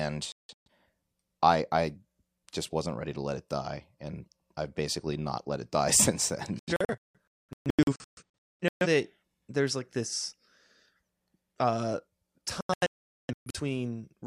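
Right at the start of the speech, from 0.32 to 0.69 s, the audio keeps blinking out: a classic digital broadcast dropout, where the receiver mutes whenever frames arrive bad or not at all. It happens again, worse, between 6.59 and 8.87 s, with about 1.4 s gone in holes up to 0.21 s long, and at 12.61 to 13.6 s, where one gap runs 0.43 s. The chopped pieces fit whole frames of roughly 43 ms being dropped, and whatever was said during those holes is simply lost.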